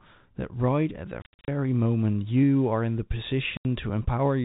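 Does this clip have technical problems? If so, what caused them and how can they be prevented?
Yes. Packet loss filled with silence opens holes in the speech from 1.22 to 1.48 s, where 210 ms drop out in scattered gaps up to 70 ms long, and from 3.57 to 3.65 s, an 80 ms gap. Lost packets, likely 10 ms each, were replaced with dead silence, not smoothed over the way concealment would, so the holes have abrupt edges. Jitter buffering, forward error correction or packet loss concealment would prevent this.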